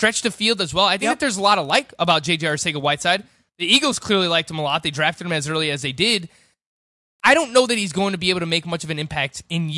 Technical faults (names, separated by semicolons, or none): resampler restarted on every block